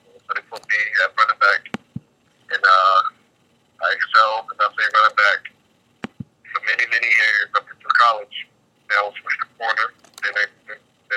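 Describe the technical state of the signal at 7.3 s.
The signal at 7.3 s is intact, with no audible fault at that point.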